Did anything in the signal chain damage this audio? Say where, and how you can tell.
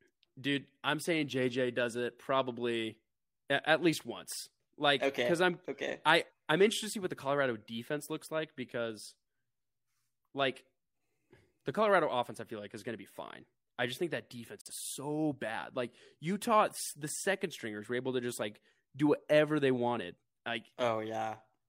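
Yes, a brief hole just after "I just think that", at 14.61 to 14.71 s, about 43 ms missing. This digital broadcast dropout fits one lost frame muted on reception.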